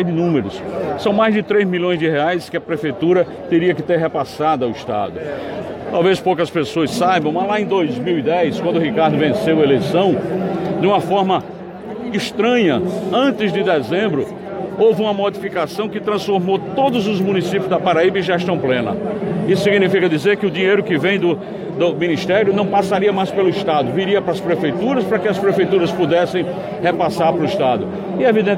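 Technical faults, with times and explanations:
Nothing technical goes wrong anywhere in the clip, so there's nothing to list here.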